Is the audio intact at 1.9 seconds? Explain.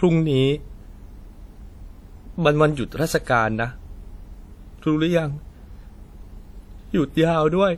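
No, at 1.9 seconds the speech is washy and ringing, with hiss pulsing along, as it is throughout. That's likely WMA compression, consistent with about 48 kbps, smearing quantisation noise across long transform blocks.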